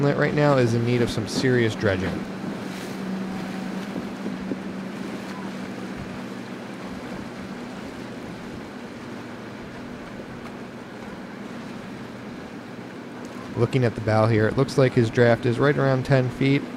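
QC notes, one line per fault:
No faults heard.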